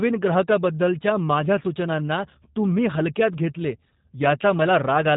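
G.729 codec damage runs through the whole speech clip: the speech is rebuilt from a vocal tract filter, a pitch predictor and a few pulses per 10 ms frame, which fits an 8 kbit/s coder. Nothing passes above 3.8 kHz, and the speech sounds plainly rough and synthetic.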